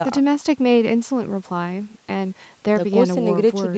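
Nothing stood out on listening to this speech recording, which has the sound of an ordinary call connection with its highest frequencies stopping at 8 kHz.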